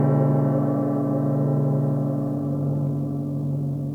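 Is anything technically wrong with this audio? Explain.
Yes. From 2.33 s to the end, there's a time-stretched section: the sound suddenly runs about 1.88 times faster while the pitch holds steady, turning rushed. It's likely software squeezing that part to fit a length, dropping short slices to keep the pitch.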